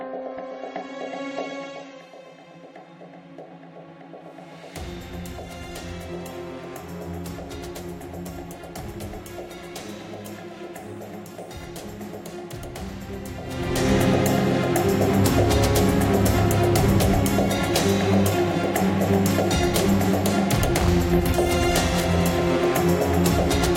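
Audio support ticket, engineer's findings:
Adaptive stream starting at a low bitrate, 0 to 2.0 s: player opened on a low-quality rendition before measuring bandwidth. Nothing above 8 kHz, heavier codec smearing, consistent with roughly 32 kbit/s MP3. Abrupt, gapless step up at 2.0 s, sounding like about 128 kbit/s.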